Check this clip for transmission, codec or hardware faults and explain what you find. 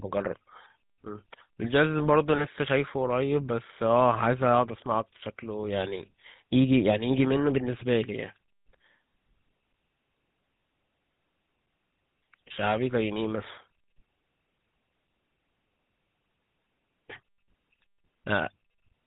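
Two faults are audible: the whole clip has passed through the GSM full-rate codec, and one short burst of GSM bit errors cuts through the speech early on.

GSM full-rate codec, throughout: The encoder reduces the speech to a vocal-tract filter plus a coarse excitation built from regularly spaced pulses, with two of every three excitation samples thrown away, which fits the 13 kbps full-rate coder. Nothing above 4 kHz survives. The damage is plainly audible as a buzzy, gravelly roughness over all the speech, with sibilants dulled by the missing top band.

GSM bit errors, 1.64 to 1.68 s: Corrupted bits from what sounds like a weak radio link reached the decoder and scrambled its filter, pitch or gain values. The damage spans about two frames' worth of audio. For that brief stretch the spectrum bends or the level jumps, and the speech breaks into a short squawk or pop before the decoder recovers.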